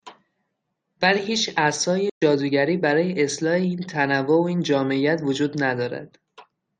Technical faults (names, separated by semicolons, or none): playback stall